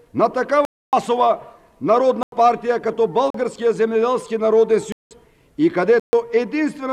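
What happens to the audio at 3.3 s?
A block of digital silence: from 3.30 to 3.34 s, roughly 40 ms of samples were replaced by zeros, so the sound cuts out abruptly and comes back with no fade, leaving a short hole.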